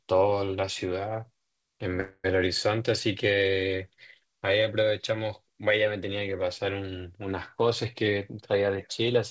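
Speech carried over a call link, with nothing above 8 kHz, which fits a wideband codec such as G.722. At 2.00 s a call audio freeze begins and lasts until 2.26 s. The last sound stretches into a fading buzz or hiss for about 240 ms, then about 20 ms of silence. Speech resumes where it stopped, with nothing lost. Delayed packets likely emptied the jitter buffer. From 8.05 to 9.13 s a jitter buffer speed-up makes the speech run at 115% speed with the pitch unchanged. It sounds hurried. The receiver repeatedly cut tiny pitch-period slices, about 150 ms in total, to reduce the built-up delay.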